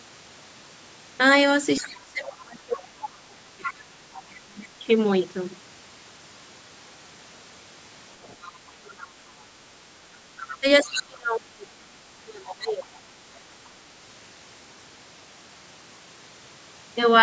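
A recorded call in speech has a second, fainter voice breaking through underneath the main talker: a brief scrap at 1.78 to 1.87 s, longer stretches at 3.02 to 4.39 s, 8.23 to 9.07 s and 10.37 to 11.03 s, and a faint trace at 12.82 to 12.97 s, sitting roughly 15 to 35 dB below the main voice. This is likely the other side's voice leaking through, played from the talker's loudspeaker back into the microphone without being fully cancelled. Overlapping those intrusions, the main voice sinks sharply, by around 30 to 35 dB at its deepest, from 1.81 to 4.85 s, 8.74 to 9.38 s and 10.6 to 12.89 s, so it drops away and comes back in pieces. The likely cause is speech suppressed in double talk: with both parties speaking at once, the echo canceller could not tell the local talker from the loudspeaker echo and pulled both down together. Across the clip the call's microphone processing leaves nothing above 8 kHz.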